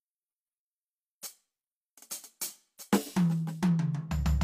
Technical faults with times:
3.02-3.08 compressed frames skipped

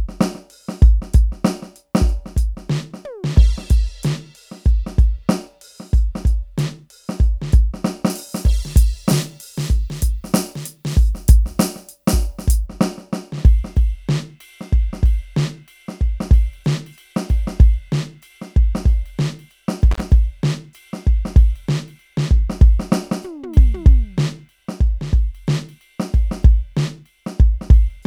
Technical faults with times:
8.10-12.66 pre-emphasis left on
19.91-20.00 intermittent contact

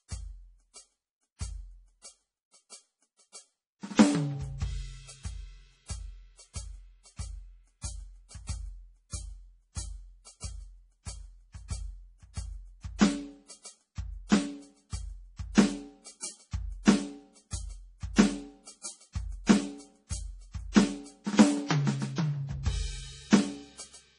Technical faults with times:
0.00-24.18 MP3 compression

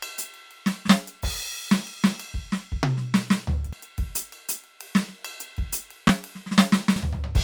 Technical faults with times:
3.73-3.76 damaged data in a compressed stream
6.07-6.10 chunks out of order
6.96-6.99 damaged data in a compressed stream

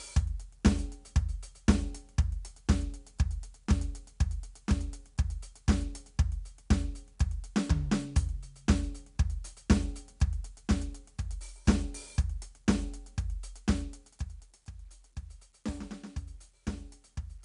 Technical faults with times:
0.00-17.44 4-bit ADPCM compression

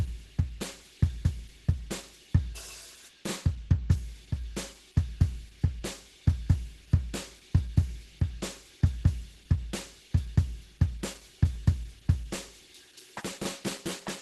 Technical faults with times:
0.00-14.22 Opus compression

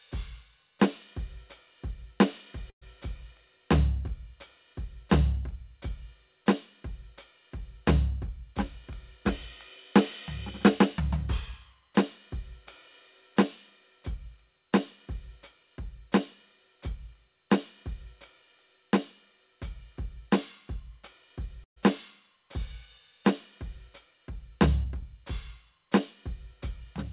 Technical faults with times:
2.70-2.83 call audio freeze
10.99-12.55 jitter buffer speed-up
21.64-21.78 call audio freeze
23.77-27.12 jitter buffer speed-up

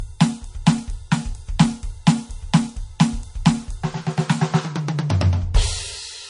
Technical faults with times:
0.00-6.29 transcoding between lossy codecs

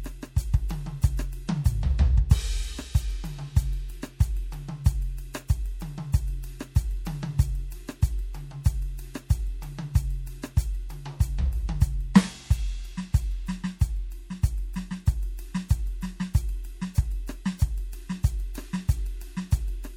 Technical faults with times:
0.00-19.97 MP3 compression
12.14 pre-echo

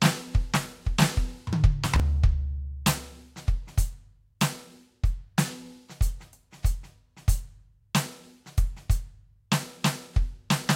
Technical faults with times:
1.84-2.00 processor overload crackle

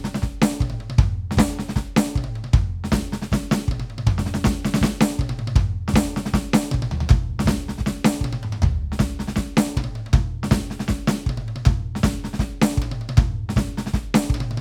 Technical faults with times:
none

